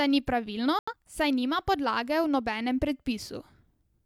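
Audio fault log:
0.79–0.93 s, digital broadcast dropout: Right after "ni pravilno" the speech cuts to silence for about 0.14 s, then resumes with "saj nima podlage". The receiver stopped getting usable frames, either from lost signal or failed checksums. It muted rather than play corrupted data. The gap points to a couple of lost frames, roughly 85 ms of programme. That stretch is not delayed but gone, so the speech jumps ahead when it returns.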